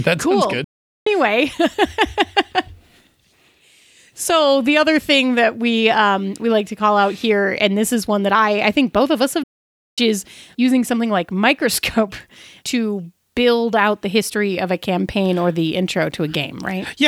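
At 0.64 s, just after "cool sounds", the speech cuts out for about 0.42 s in a playback stall, and again at 9.43 s after "both of us have" for about 0.54 s before "is using something like". The likely cause is the player starving for data. Both gaps show as flat waveform and blank spectrogram columns.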